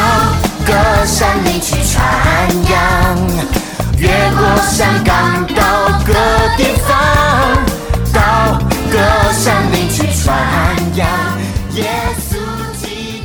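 The sound has hard clipping throughout. It is driven about 11 dB past full scale, so a few percent of samples are cut flat, giving harsh fuzz on loud passages.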